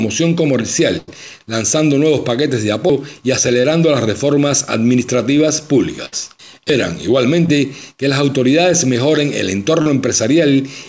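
The audio comes through a call path with the G.722 band limit, so there's nothing above 8 kHz, which fits a 64 kbps setting. On top of that there are three kinds of fault. First, two bursts of packet loss: at 0.98 to 1.10 s roughly 100 ms went missing, and at 6.06 to 6.14 s about 60 ms did. In both spots the receiver kept extending the last bit of sound and fading it down, so you hear a held buzz or a dying hiss before the audio picks up again further along, with the stretch in between simply gone. Second, there are two skips at 2.9 s and 6.7 s, each dropping about a fifth of a second with the two sides butted straight together and no silence in the gap. That's most likely audio missing between chunks, a recorder or processor losing a piece each time it closes one block and opens the next, and the spacing fits roughly 4-second chunks. Third, there are three short concealed packet losses, at 3.62 to 3.66 s, 7.46 to 7.50 s and 9.82 to 9.88 s, each 20 to 40 ms. 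The decoder patched those holes by continuing the previous sound and blending back into the real signal, so they come across as quick smears or wobbles, and anything very brief that fell inside them can drop out entirely.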